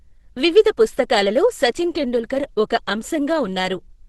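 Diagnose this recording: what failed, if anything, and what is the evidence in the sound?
The codec stage failed, throughout the speech. The sound is muffled, hoarse and grainy, with nothing above 12 kHz. That points to heavy Opus compression, likely in its hybrid speech mode. It fits a starved rate near 12 kbps, which narrows the band and roughens the tone.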